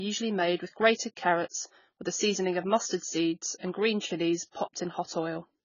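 From start to finish the speech sounds dull and smeared, with nothing above 7 kHz, so sibilants lose their edge and turn fizzy while sustained sounds warble. The damage is heavy, which points to AAC compression, likely AAC-LC at a very low bitrate, around 16 kbps. With so few bits per frame, the encoder drops the top of the spectrum, leaves gaps between bands and roughly approximates the rest, producing that swirling, muffled texture.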